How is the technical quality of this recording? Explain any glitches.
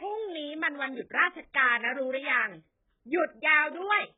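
The technical quality is poor: the speech is heavily degraded by lossy compression for the whole clip. The damage points to AAC compression, likely AAC-LC at a very low bitrate, which fits something near 8 kbps. Throughout, nothing is present above about 3.7 kHz, so the speech sounds dull and boxy. At this rate the encoder discards most spectral detail, leaving gaps and substituted noise within the remaining band. Sustained vowels warble, and sibilants come out smeared and fizzy rather than crisp.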